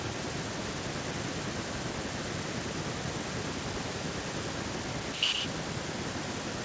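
From the very start at 0 s right through to the end at about 6.65 s, there's an echo leak. A second copy of the speech trails the original by about 118 ms, sitting roughly 10 dB below it. The likely cause is a far end on a loudspeaker whose echo canceller let some of its mic pickup slip back down the line. The band tops out around 8 kHz, as you'd expect from the call's mic processing.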